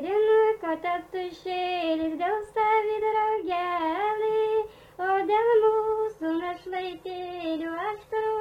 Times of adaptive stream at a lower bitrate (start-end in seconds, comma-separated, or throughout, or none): 5.68-8.40